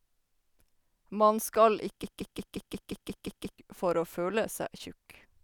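A broken-record loop runs from 2.04 to 3.58 s in this speech clip: a 0.18 s fragment repeats exactly nine times back to back, replacing whatever should have played there, until the sound resumes at "for å". A playback or stream stall is the likely cause.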